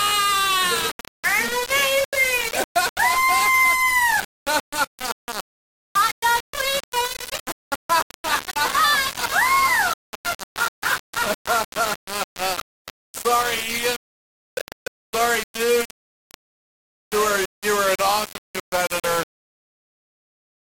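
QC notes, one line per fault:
throughout: low bit depth without dither, grainy distortion tracking the sound, quiet parts sputter or drop out; likely 3-bit rounding, error about 10 dB down.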